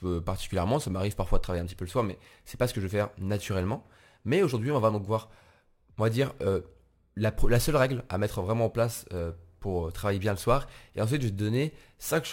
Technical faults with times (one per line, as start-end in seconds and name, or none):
0.00-12.32 crude rate conversion